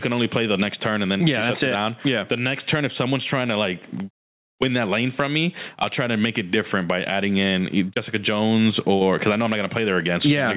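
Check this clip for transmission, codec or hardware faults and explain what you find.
One fault is present throughout the clip: gain pumping. The input gain was likely set far too high for the microphone, so a fast limiter clamps down on every loud syllable and releases in the pauses. The gain swings by about 15 dB, squashing loud and soft parts together into a breathing, compressed sound. The audio also stops at 4 kHz, as expected from the G.711 call codec it passed through.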